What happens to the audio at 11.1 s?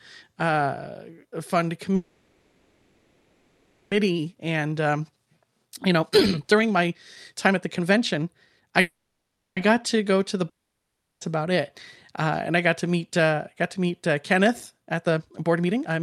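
At 11.1 s the speech has dropped out entirely. From 10.49 to 11.24 s, right after "to the", the last sound trails off briefly and leaves about 0.7 s of silence, with speech resuming at "about it". This is likely a long network dropout: roughly 0.72 s of audio never arrived and is simply gone. Unlike a brief packet-loss glitch, the concealment cannot bridge a gap this long, so it fades into silence.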